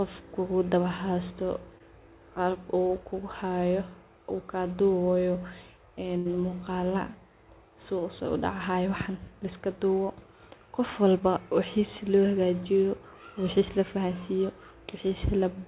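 Short concealed packet loss occurs twice, at 1.78 to 1.82 s and again at 2.88 to 2.91 s. In each case a small stretch of the call, about 20 ms, failed to reach the decoder in time, and the receiver bridged it by stretching the preceding sound for roughly 15 ms before blending back into real audio. Each gap comes through as a brief smear or wobble in the speech, and a very short sound can drop out entirely.

A burst of packet loss follows at 6.17 to 6.27 s, where 80 ms of consecutive audio went missing. The receiver carried the last sound forward across the whole 80 ms hole, letting it fade as the gap lengthened, so the speech turns into a held, decaying tone or hiss before picking up again further along, with the lost portion simply absent. The call path's band limit, with nothing above 4 kHz, points to a G.711 mu-law codec at 64 kbps.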